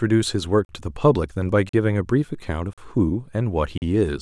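Speech, broken by a gap between chunks. Four short silent holes with hard edges fall at 0.65, 1.69, 2.73 and 3.78 s. Each lasts about 43 ms. They recur every second, which points to audio delivered in one-second chunks with silence inserted at each join.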